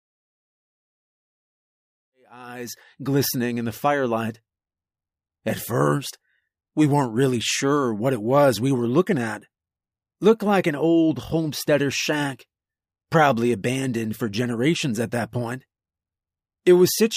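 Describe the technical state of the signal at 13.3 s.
At 13.3 s the speech signal is intact, with no dropout, click, distortion or level disturbance to be heard.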